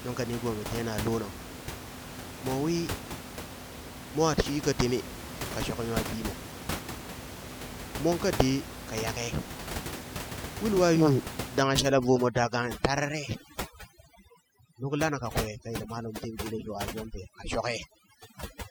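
At 11.62 s the audio changes. Overdone noise removal takes hold and lasts to the end of the clip at 18.71 s. The room noise, which sits only about 10 dB below the speech, is treated as something to erase. Each frequency band near that noise level is pushed far down or switched off. Quiet parts of the voice go with it. The background drops and breaks up into twinkling specks.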